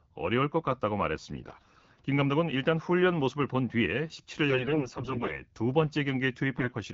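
From 1.32 to 2.00 s, 4.48 to 5.42 s and 6.57 to 6.75 s the speech shows AMR bit errors, with roughly one bit in ten flipped in the first stretch and around one in seven in the later two. Corrupted low-priority bits misplace the excitation pulses and skew fine pitch, gain and spectral values, so the voice holds its pitch and level but turns hoarse, scratchy and gargly. Around these stretches the AMR-WB coding at 12.65 kbit/s stays clear.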